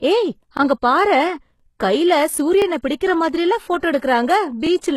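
Throughout, the treble sounds gritty and metallic with nothing above 12.3 kHz, likely HE-AAC compression at a low bitrate near 16 kbps; spectrograms show copied, mismatched upper bands. At 0.57, 1.60, 2.62 and 3.64 s, overlapping chunks replay about 23 ms at each join, giving a click or stutter; the waveform shows a duplicated segment. At 3.80 to 3.83 s, pre-echo spreads 30 ms of hiss before an attack, softening it; the spectrogram shows noise smeared ahead of the onset. At 4.67 s the same overlapping-chunk stutter recurs, keeping its roughly one-second spacing.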